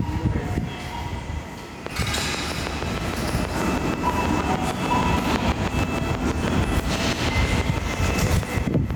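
Throughout, loud and soft parts sit closer in level and the sound is squashed, with a swing of roughly 10 dB. This is gain pumping, likely from gain set too high with a fast limiter clamping down. From 1.87 s to 8.92 s comes a train of clicks: about fifty evenly spaced ticks at 6.25 per second, peaking around 10 dB above the sound and audible in quiet moments too, likely from electrical interference or a faulty connection.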